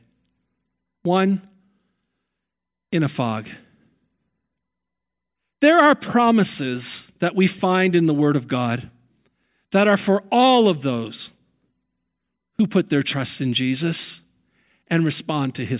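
No technical faults can be heard anywhere in the recording.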